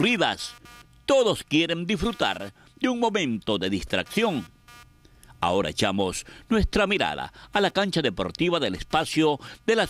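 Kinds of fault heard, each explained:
Computer activity noise: there's a faint buzzy, chirping layer under the whole clip, pulsing at somewhere around 200 times a second and sitting roughly 30 dB below the main sound. What's happening is that the computer's processor, graphics or mouse activity shifts the ground the audio circuit shares with it, so the interference rises and falls with what the machine is doing rather than with anything in the sound itself.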